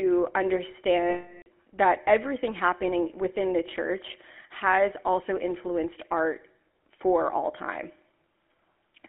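Throughout, the speech has a buzzy, gravelly roughness and a narrow band of roughly 250 Hz to 3.4 kHz, the sound of the GSM full-rate codec at 13 kbps. From 1.1 to 1.48 s, just before "that everything happening within", a rough metallic ring holds in place of the speech for about 360 ms. These are lost GSM frames, each replaced by the last good frame's settings.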